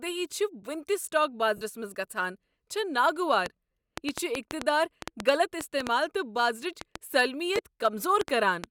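At 1.57 to 1.61 s, just before "منٛز گژھان چھےٚ", the speech briefly turns into a hissy, grainy smear for about 45 ms. This is lost LE Audio frames: a short run of Bluetooth LE Audio frames never arrived (the gap fits about six 7.5 ms frames), so the LC3 decoder filled it by repeating the last received spectrum with scrambled phase. That substitute sounds like noise rather than voiced sound.

From 3.46 s to the end at 8.65 s, a train of clicks ticks over the speech and through its pauses. There are roughly twenty sharp, similar pops, arriving unevenly at about 3.5 per second and standing around 20 dB above the speech. A repeated pulse of the same shape like this most likely comes from electrical interference or an interface that keeps glitching.

At 7.57 to 7.59 s, underneath the clicks, another 15 ms dropout of LE Audio frames leaves a smaller noisy blur, consistent with about two missing frames.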